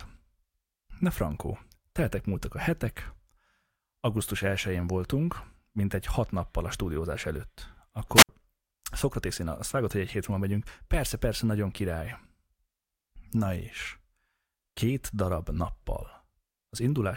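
At 8.15 s there's a wireless microphone squelch dropout lasting to about 8.29 s. The FM signal fades, so you hear a quick swell of hiss. Then the receiver's squelch kills the output for roughly 66 ms, leaving a near-silent hole before the speech comes back.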